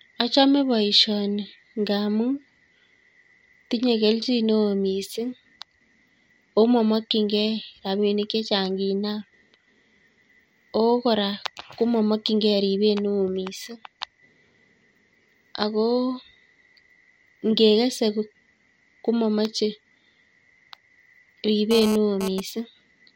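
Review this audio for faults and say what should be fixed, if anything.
A hard, raspy buzz at 217 Hz with many harmonics sits under the speech from 21.71 to 22.40 s at about 8 dB below it. This is GSM phone buzz: the audio circuit rectifies data-transfer bursts from a nearby 2G phone. Keep phones away from the recording chain or put them in airplane mode.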